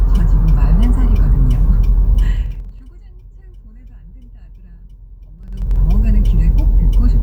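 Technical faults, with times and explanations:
2.23 to 2.88 s, zipper noise: the level drops by roughly 25 dB in unsmoothed 2 dB jumps, about twenty a second, so each jump clicks and a ticking rides on the sound.
5.39 to 5.76 s, zipper noise: the level climbs back by roughly 25 dB in 3 dB steps, giving the same zipping tick.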